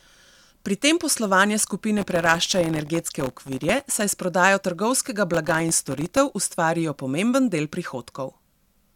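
From 1.98 to 4.01 s, right after "tem poslovanje", the speech picks up processor overload crackle. It comes back from 5.32 to 6.17 s, after "s prodajo trgovskega". Tiny buffers, well under a millisecond, keep missing their deadlines and drop to silence, so you get a gritty, tearing crackle.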